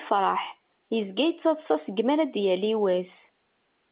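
Nothing in this speech clip points to a technical fault. It carries the narrow band of G.711 telephone coding, with nothing above 4 kHz, which fits 8 kHz A-law telephone audio working as intended.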